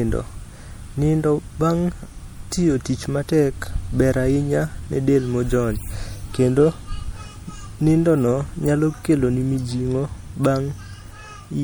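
Speech runs the full length of the clip with plainly audible MP3 compression damage throughout: the sibilants have a swirly, watery edge and consonant attacks smear. This is likely the work of an encoder starved of bits, which fits a low bitrate around 64 kbps. Weak frequency lines drop in and out from frame to frame. On a spectrogram the upper bands look patchy and flickering, with small holes blinking on and off, and the energy ends at about 21.6 kHz.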